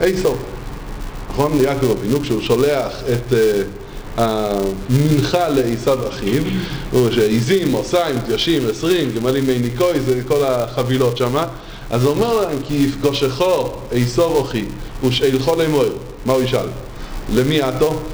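Filter restarted on every block, throughout the audio: each block starts from a cleared state, leaving a level-following 375 Hz buzz that fits 128-sample blocks.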